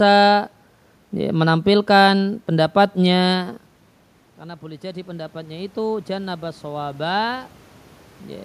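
After the talker moves back from the microphone at around 3.5 s, the input level falls by about 16 dB, and from 4.59 s to 7.57 s the automatic gain control rises to compensate. It raises its gain gradually by about 8 dB over those three seconds, so the speech swells back up, though not fully to its earlier level. The room noise climbs with it, because the control lifts the whole signal.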